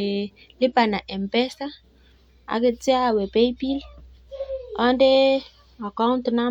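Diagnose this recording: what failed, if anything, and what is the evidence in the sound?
No failure is audible at any stage here.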